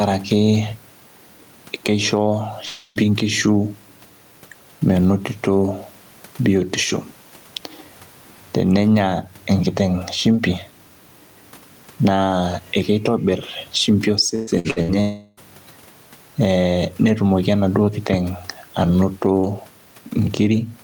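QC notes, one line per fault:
Throughout: gain pumping. The level swings by around 10 dB and keeps moving with the speech. The room noise sits about 41 dB below the speech. Loud and quiet syllables land close together, so delivery sounds squashed and breathing. This is likely an input gain set far too high, with a fast limiter or compressor clamping down on each loud sound and releasing between them.
2.65–2.98 s and 15.00–15.40 s: long network dropout. Audio stops arriving for about 0.3 s in the first case and about 0.36 s in the second. Neither gap falls to silence. The receiver stretches the last sound across the hole as a fading buzz. The real audio then resumes later, with that stretch of speech simply gone. A likely cause is a network stall long enough to empty the receive buffer.
14.35–14.91 s: repeated packet loss (robotic sound). Four short holes land within about half a second. 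The longest is about 117 ms. Each hole is patched by continuing the previous sound, and the next one follows almost at once. Roughly half of this span is patched rather than real, so the speech turns choppy, with fragments missing. It leads straight into the second dropout.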